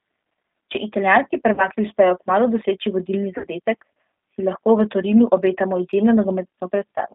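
G.729 codec damage runs through the whole recording. The speech sits in a narrow line band of about 200 Hz to 3.7 kHz, and the sound is plainly rough and synthetic. That fits an 8 kbit/s G.729A coder, which rebuilds the speech from a vocal tract filter, a pitch predictor and a few pulses per frame.

VoIP packet loss concealed by the speech codec appears from 1.54 to 1.66 s and again from 3.38 to 3.47 s. In both places the decoder smears the last sound into a fading buzzy tone or coloured noise and then recovers weakly. The gaps point to about 40 ms and 60 ms of missing audio, which fits two and three lost 20 ms packets.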